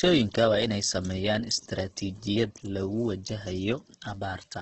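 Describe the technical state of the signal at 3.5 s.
Opus compression at 3.5 s, as throughout the clip: the speech is likely passing through Opus in its CELT music mode at a low rate, consistent with about 12 kbps. Starved bands are filled with folded or noise content, so the speech sounds rough and grainy, heavily damaged, with nothing above 8.2 kHz.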